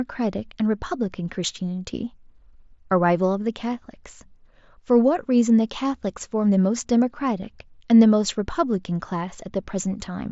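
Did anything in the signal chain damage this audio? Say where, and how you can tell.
No, nothing in the chain damaged this speech; the only stage that leaves a mark is the Bluetooth mSBC headset codec, whose 8 kHz top end and faint graininess on louder syllables are what that wideband link normally sounds like.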